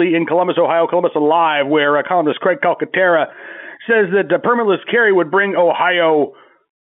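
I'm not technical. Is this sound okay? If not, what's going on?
Yes, nothing here is wrong; the speech has the narrow, slightly boxy sound of an ordinary phone line, which is just how G.711 telephone coding sounds when it's working normally.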